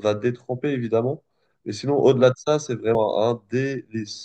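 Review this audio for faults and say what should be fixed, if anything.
A CD skip at 2.95 s: the laser jumped tracks, giving a brief mute of a few milliseconds and a tick before playback resumed elsewhere. Re-rip from a clean, undamaged disc on a stable drive using secure error-checking extraction.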